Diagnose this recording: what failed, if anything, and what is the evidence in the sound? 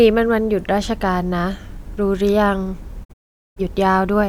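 A digital broadcast dropout, on the reception side. From about 3.03 to 3.61 s the speech fades out over roughly 20 ms and goes silent in short holes, the longest about 0.43 s. The receiver lost good frames and muted until clean ones returned, so that audio is gone.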